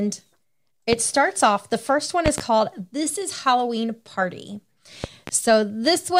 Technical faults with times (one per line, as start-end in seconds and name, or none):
0.93-0.96 loud pop
2.26-2.42 loud pop
5.04-5.31 loud pop